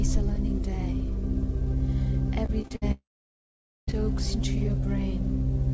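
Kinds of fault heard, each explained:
Repeated packet loss (robotic sound): From 2.46 to 2.84 s the sound turns choppy. Four short holes, the longest 56 ms, get patched by stretching the previous sound, so roughly a third of that stretch is filler.
Long network dropout: Right after, at 2.92 s, the audio cuts out for nearly a second, to 3.89 s. A brief smeared continuation fades into about 0.84 s of silence, and the audio returns with that chunk gone. The likely cause is the network stalling.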